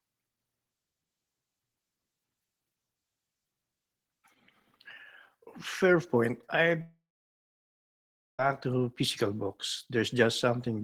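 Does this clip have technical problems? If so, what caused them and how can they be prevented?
Yes. From 6.81 to 8.40 s the speech cuts out. A brief fading buzz carries on the last sound. Then about 1.39 s of silence follows. Speech returns at "to physical", with 1.58 s of audio gone. This is likely a long network dropout, where no audio reached the receiver and it filled the gap. A more stable connection and a larger jitter buffer with retransmission would prevent it.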